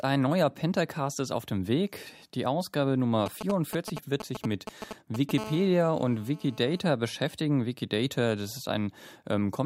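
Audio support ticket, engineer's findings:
GSM signalling bursts, 3.26 to 5.31 s. Galloping ticks and short 217 Hz buzzes, nearly as loud as the speech. Nearby 2G phone signalling; audio circuit rectifying its RF bursts.

GSM phone buzz, 5.38 to 6.80 s. Steady raspy 217 Hz buzz, rich in harmonics, about 17 dB below speech. Nearby 2G phone in a call; continuous bursts rectified into audio.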